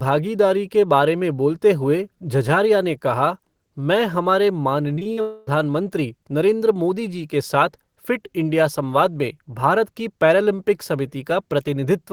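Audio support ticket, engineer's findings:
Repeated packet loss (robotic sound), 4.95 to 5.19 s, right after "ने कहा मैं हमारे". Choppy speech: a few short holes, longest about 40 ms, each patched by repeating the previous sound. Roughly 40% of that stretch is concealed. Jitter buffer or network path.

Smeared buzzy hold, 5.21 to 5.49 s: about 0.26 s of stretched-out sound with no true silence, then speech resumes with that chunk gone. Likely a long network dropout, with the receiver's concealment filling the whole gap.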